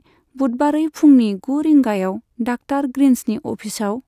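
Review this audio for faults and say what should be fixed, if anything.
No faults heard; nothing needs fixing.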